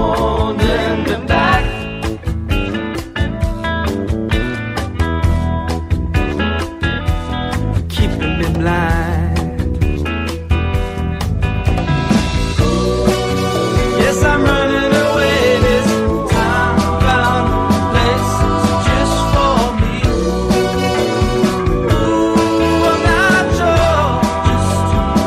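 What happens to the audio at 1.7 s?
Just before 1.7 s the sound stutters: a 50 ms slice running from 1.64 to 1.69 s plays, then immediately plays once more, giving a brief hiccup where the audio seems to catch on itself. This is a repeated-frames fault. A short run of compressed frames, five frames in all, was written or delivered twice, so the decoder rendered the same fraction of a second again, and the clip runs 50 ms longer from that point on.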